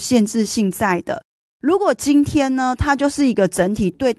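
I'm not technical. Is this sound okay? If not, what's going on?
Yes, nothing stood out as a problem when listening to this speech recording, which came through an ordinary internet call connection.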